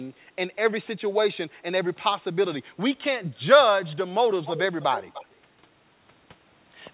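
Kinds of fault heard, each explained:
Echo leak: A delayed copy of the speech comes back in two short scraps, from 4.45 to 4.62 s and from 4.81 to 5.26 s. It trails the original by 299 ms. The first scrap sits about 10 dB below the speech. The second is weaker, about 15 dB below. This likely comes from a far-end loudspeaker whose echo canceller let some microphone pickup through. Like the rest of the call audio, the echo has nothing above 4 kHz.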